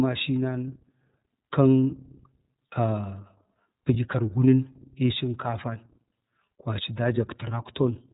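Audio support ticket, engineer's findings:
iLBC codec, whole clip: narrowband VoIP encoding, each 30 ms frame coded independently, consistent with a 13.33 kbps mode. Speech band stops near 3.8 kHz, so it sounds dull and boxy. Plainly audible rough, synthetic texture on speech throughout.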